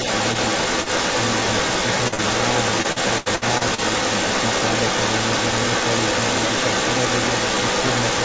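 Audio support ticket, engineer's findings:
Echo leak, whole clip (0 to 8 s): delayed second copy of the speech trailing by 345 ms, roughly 5 dB louder than the direct speech. Likely cause: far-end echo canceller not removing loudspeaker pickup. Spectrogram shows harmonic patterns repeated 345 ms later. Waveform envelopes are smeared, with bursts overlapping.

Short concealed packet loss, two back-to-back at 2.08–2.14 s and 2.14–2.20 s: brief smear/wobble, about 40 ms missing each, patched by extending the preceding sound. Spectrogram shows frozen, flattened detail across roughly 0.12 s. Waveform shows the last sound continued, then a crossfade back.

Repeated packet loss (robotic sound), 2.82–3.80 s: choppy stretch, six holes concealed, about a quarter of the span synthesized, longest gap 77 ms. Spectrogram shows repeated blocks of static, smeared harmonics alternating with real detail, all inside the G.722 band that ends at 8 kHz. 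Waveform shows looped-looking segments.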